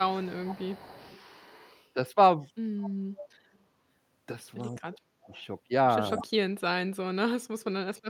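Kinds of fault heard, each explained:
Echo leak: A faint copy of the speech returns 203 ms behind the original, from 0.0 to 1.87 s and 2.8 to 3.57 s, with short flickers at 5.24 to 5.42 s and 6.17 to 6.23 s. It sits roughly 35 to 15 dB below the direct speech. The likely cause is a loudspeaker on the far end whose echo canceller let part of the pickup through. A spectrogram shows ghost harmonic traces shifted about 0.2 s right of the originals.
Speech suppressed in double talk: Where both sides talk at once, the speech is pushed down hard: from 4.68 to 5.34 s by about 30 dB over a few hundred milliseconds, from 6.01 to 6.95 s by about 40 dB over roughly half a second, and from 7.31 s to the end by about 40 dB. The waveform envelope pinches almost flat in those spans, and the spectrogram shows holes in the speech energy. This is likely an echo canceller that couldn't separate talker from echo and muted both.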